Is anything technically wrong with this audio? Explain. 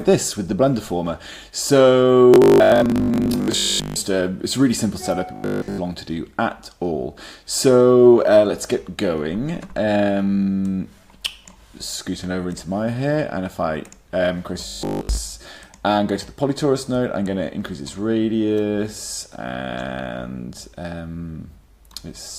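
Yes. Three stretches, 2.34 to 3.96 s, 5.36 to 5.78 s and 14.67 to 15.19 s, turn into a rigid metallic buzz at 50 Hz that only loosely tracks the underlying sound. This is robotic sound from repeated short buffers. The likely cause is audio arriving too late, so playback loops the last 20 ms or so to fill the gap. In the first and third stretches most of the audio is replaced this way, and in the middle one all of it is.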